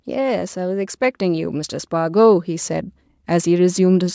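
Speech whose level and background noise swell together steadily from 0.05 s to 4.1 s, climbing by about 9 dB. This is automatic gain rising: the call's gain control judged the input too quiet and kept raising it. The call microphone processing removes the lowest bass and leaves nothing above 8 kHz.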